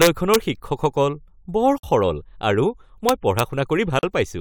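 Right at the start, from 0.02 to 0.36 s, there's integer overflow. Loud peaks push past the top of the integer range, about 4 dB over, and instead of being limited they wrap to the opposite sign. The result is harsh cracks, far nastier than ordinary clipping. At 1.78 to 1.83 s the speech drops out for about 52 ms, a gap at a join of encoded pieces. Separately encoded chunks were stitched together without trimming the encoder's start delay and end padding, so a short silence with blurred edges opens before the speech picks up where it left off. The overflow returns from 3.09 to 3.40 s, this time only about 1 dB over. A second join gap follows at 3.99 to 4.03 s, about 41 ms long.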